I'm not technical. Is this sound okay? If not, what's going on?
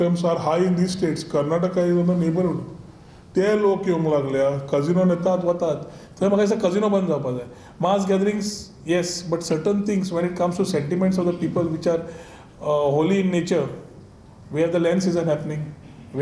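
No. From the start to about 5.27 s there's a wrong sample rate fault: the audio plays about 8% too slow and sounds about one and a half semitones lower, which fits audio made at 24 kHz being played back at 22 kHz.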